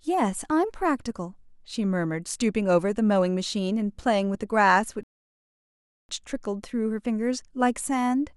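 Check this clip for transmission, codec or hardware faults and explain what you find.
One transmission fault is present: a rebuffering stall. At 5.03 s the speech cuts to silence until 6.09 s, adding about 1.06 s, because playback exhausted its downloaded audio and waited for more. Unlike a dropout, nothing is missing: the speech resumes exactly where it stopped.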